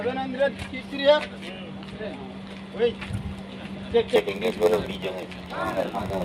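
A block size mismatch with zero padding sets in at 4.15 s and runs to the end of the clip. One stage delivers shorter blocks than the next stage reads, which fits a 512-sample read, and the shortfall in each block is filled with silence. Those regular gaps produce a buzz at 93.8 Hz, and the audio plays at 0.938 times its normal speed while keeping its timbre.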